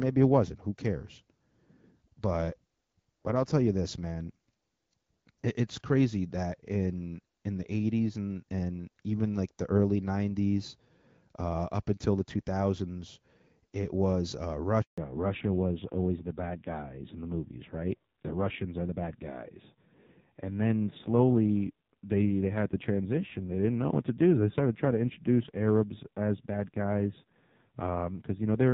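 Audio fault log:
14.82 to 14.98 s, handover gap: right after "it was uh" the sound drops out for 160 ms as the call switches networks and no speech frames arrive during the changeover, so the audio fades within a few tens of milliseconds, stays silent, and that stretch is simply lost.
14.98 s to end, fallback to narrowband: after the gap the call leaves HD Voice, AMR-WB at 12.65 kbit/s with only light coding damage, for AMR-NB at 5.9 kbit/s, so nothing above 4 kHz remains and the speech turns duller and rougher for the rest.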